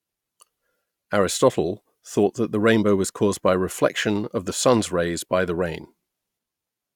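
Nothing stood out on listening to this speech recording.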